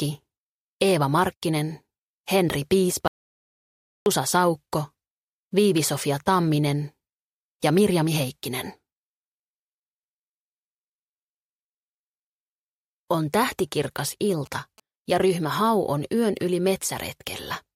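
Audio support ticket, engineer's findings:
Audio dropout to silence, 3.08–4.06 s: sound cuts off mid-flow and returns abruptly after roughly 1 s. The gap is silent with no room tone, so a flat line in the waveform and a fully black vertical band on the spectrogram. Likely cause is input loss upstream, such as a disconnected device, failed link or stray mute, while the recorder kept writing silence. The material in the gap is unrecoverable.

GSM signalling bursts, 13.52–14.80 s: a galloping dit-dit-dit of short buzzes repeating at about 217 Hz, around 25 dB below the wanted sound. A 2G handset nearby is signalling, and the audio circuit rectifies the RF bursts. On the spectrogram, this shows as a comb of harmonics at 217 Hz spacing in broadband vertical stripes. The waveform shows regular spiky pulse clusters.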